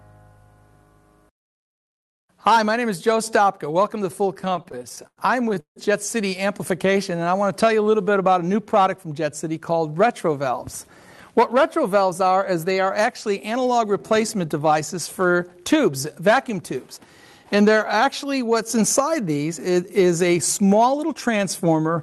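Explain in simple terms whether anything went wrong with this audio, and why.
Between 4.35 and 6.4 s there are repeated stalls (stutter). The audio kept arriving late, so the playback buffer ran dry 21 times. Each time the last sound was stretched to fill the wait, the longest for 160 ms. Nothing is lost, but it drags and stutters.

Right after, from 6.87 to 8.31 s, you get a jitter buffer slow-down. The receiver was rebuilding its reserve by repeating tiny slices of sound. That adds about 150 ms and runs at 90% speed with the pitch unchanged, so things sound drawn out.

From 11.38 to 13.56 s it goes the other way with a jitter buffer speed-up. Too much audio had piled up, so the receiver snipped out small pieces, roughly a tenth of a second in all. The sound runs about 5% fast and a bit hurried, pitch unchanged.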